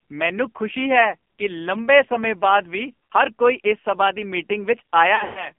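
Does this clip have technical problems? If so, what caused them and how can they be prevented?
Yes. The speech is heavily damaged by the AMR narrowband mobile codec throughout: band-limited to about 200 Hz to 3.4 kHz, buzzy and synthetic, consistent with a low mode near 5.9 kbps. A higher AMR mode or a wideband codec would prevent this.

Lost AMR speech frames appear at 3.05 to 3.13 s, a 60 ms warble that fits three 20 ms frames concealed from stale parameters. The same fault returns between 5.16 and 5.51 s, where scattered losses over about 200 ms include a 120 ms run that stretches the sound and fades it toward silence. A stronger radio link or a stronger error-protection scheme would prevent these losses.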